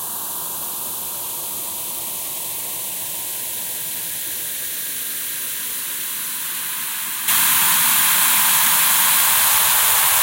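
Everyday sounds, with a sudden gain jump at 7.28 s: the level rises by about 9 dB in a single step and stays there to the end. The background noise jumps with the sounds, which rules out a louder source or a gradual fade. The likely cause is a gain change applied without any ramp.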